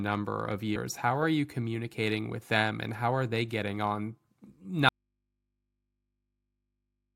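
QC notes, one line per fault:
4.89 s to the end: audio dropout to a faint residue. The speech cuts out abruptly mid-flow and never comes back, and what's left in the gap is a low mains hum sitting roughly 55 dB below the speech level. It's a hard switch, nothing like a natural pause or a fade. The likely cause is the source feed dropping while the input downstream stayed live, so you're hearing that open input's hum for the remainder.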